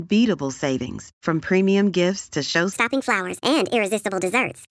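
From 2.73 s to the end, the speech runs at the wrong sample rate. It lurches into a higher, faster delivery, about 1.38 times normal speed and about 5.5 semitones up in pitch, so voices sound chipmunk-like and rushed. Pitch and tempo shift together because the samples are played back faster than they were captured, with no rate conversion. The ratio fits audio recorded at 16 kHz being played at 22 kHz.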